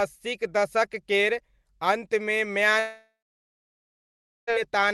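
A long network dropout runs from 2.79 to 4.50 s, right after "अस्सीक दशक केर अन्तमे". The speech stops, and the receiver stretches the last sound into a fading buzz that gives way to near silence for about the final 1.36 s of the gap. When the audio resumes, about 1.68 s of speech is simply gone, which points to a stall in incoming packets as the likely cause.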